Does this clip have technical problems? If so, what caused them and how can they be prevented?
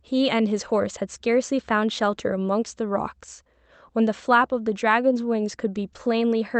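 No, there are no technical faults in this speech; it arrives over a WebRTC call path using Opus at 32 kbps, with the top end stopping at about 8 kHz as that codec setting dictates, so there is nothing to prevent.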